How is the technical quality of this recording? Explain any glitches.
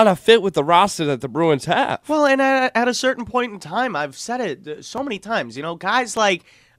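Three brief clicks mark the recording, at 3.00, 4.98 and 6.17 s. Each is likely a case of dropped samples: under a millisecond of audio goes missing, so the waveform jumps abruptly between values. The speech continues without a gap, but each jump sounds as a sharp tick and appears as a thin vertical line across the spectrogram.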